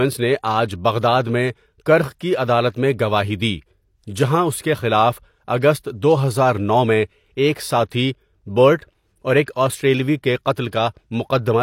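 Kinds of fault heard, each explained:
Pre-echo: Near the end of this speech clip, from about 9.43 to 9.48 s, there's a short hiss sneaking in roughly 46 ms ahead of a sharp attack. That's the codec's block-based coding at work: the quantisation noise it budgeted for the loud onset gets smeared across the whole block, so it also fills the quiet gap just before. You hear the hiss arrive early, and the attack itself loses its crispness.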